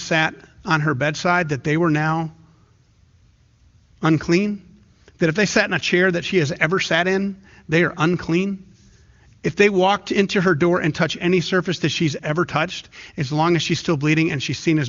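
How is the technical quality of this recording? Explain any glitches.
The technical quality of this speech recording holds up well, and there are no glitches to explain.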